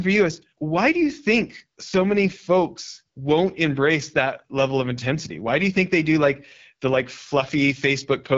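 Throughout the speech, an AMR wideband (HD Voice) codec running at one of its lowest rates, which fits the 8.85 kbit/s mode, has to rebuild the voice from a sparse pulse-driven model, leaving it plainly rough and raspy, with nothing above 7.4 kHz.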